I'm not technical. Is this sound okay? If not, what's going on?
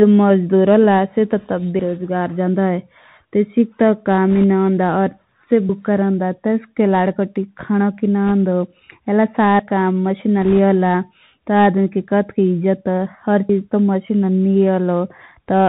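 No. The whole recording sounds muffled and scratchy with a grainy hiss, because it went through a Bluetooth CVSD headset codec, which cuts off high sounds.

At 4.36 to 4.44, 8.28 to 8.30, and 10.42 to 10.57 seconds, brief rushing crackle appears. These are bit errors on the Bluetooth voice link, where the wireless signal was briefly corrupted.

At 5.69 and 13.49 seconds the sound jumps abruptly, skipping about a tenth of a second. This is audio missing between chunks, likely from the recorder losing a bit while switching between 4-second pieces.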